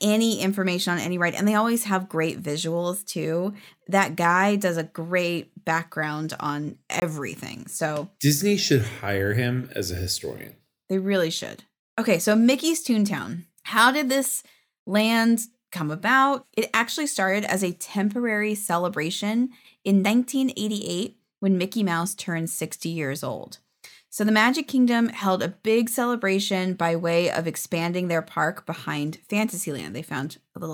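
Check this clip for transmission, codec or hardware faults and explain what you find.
One fault: a block of digital silence from 7.00 to 7.02 s, most likely where the output buffer went unfilled, so 20 ms of speech dropped out, heard as a short hole in the speech.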